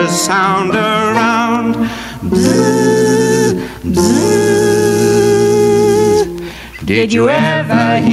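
Gain pumping runs through the whole clip, a swing of roughly 15 dB, likely from gain set far too high with a fast limiter clamping it. Unlike a noise gate, it squashes loud and soft parts closer in level rather than silencing the gaps.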